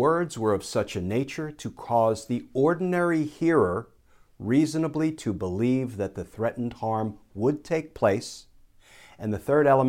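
A converter clock that wavers by a few microseconds makes this speech recording suffer sample clock jitter from 0.40 to 2.38 s, ending just before "ordinary hearer reasonably to". Each sample lands slightly off time, and the error scales with how fast the waveform is changing, sitting around 35 dB below the signal. The result is a grainy hiss riding on the louder, brighter parts of the voice that drops away in the pauses.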